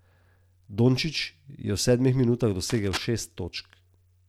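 From 2.70 to 3.03 s, a dense, ragged rustle scrapes across the speech for about a third of a second, sitting roughly ten decibels below it: present, but not drowning it out. This is cable scratch noise. The likely cause is a worn lead, connector or control being moved, so its contact resistance jumps about rapidly and pushes irregular bursts of noise into the signal until the movement stops.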